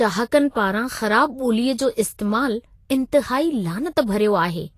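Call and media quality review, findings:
Vorbis compression throughout the speech: hissy, grainy treble, roughened tones, nothing above 14.2 kHz. Likely a low-quality Vorbis encode, fitting about 33 kbps, with coarse treble quantisation turning detail into noise. Unlike a simple low-pass, the band below the cut-off is grainy too.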